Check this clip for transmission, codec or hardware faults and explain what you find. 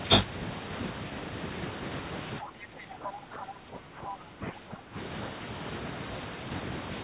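Two faults show up in the middle of the clip, over a narrowband call path with nothing above 4 kHz, which fits G.711 mu-law at 64 kbps.

From 2.4 to 4.97 s the speech sags by up to about 10 dB, dipping and thinning in patches. This is speech suppressed in double talk. The echo canceller likely could not tell the talker from loudspeaker echo while both sides spoke and attenuated everything.

From 3.05 to 3.10 s a brief scrap of the other side's voice leaks through, roughly as loud as the talker. It is likely loudspeaker playback that the echo canceller failed to remove from the microphone signal.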